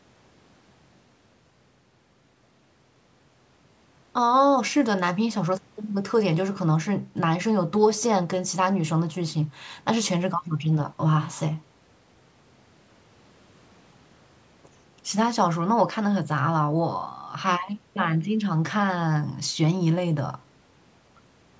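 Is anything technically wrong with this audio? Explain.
No, nothing is technically wrong.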